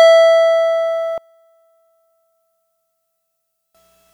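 A music clip in which, from 1.18 s to 3.75 s, the sound collapses by about 27 dB, most likely because one channel is inverted, so the shared content of left and right cancels when the two are summed to mono. Unlike a plain gain drop or dropout, which would leave a quieter but complete copy or silence, what survives here is only the difference between the channels, with the centred material gone.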